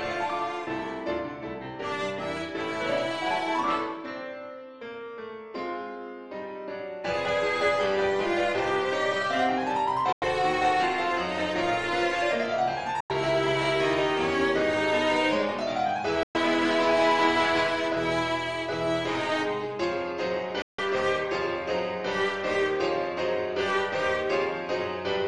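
At 10.12–10.24 s, 13.00–13.12 s, 16.23–16.36 s and 20.62–20.80 s the audio drops to silence for 93 to 163 ms, likely a Bluetooth dropout, with packets missing the headphones. Unlike a stall, each resumes further along, the gap skipped rather than delayed.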